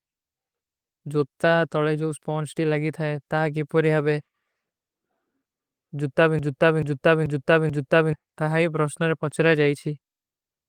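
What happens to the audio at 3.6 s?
Nothing goes wrong at 3.6 s: the speech runs through that moment intact, with no dropout, click, distortion or other fault to be heard.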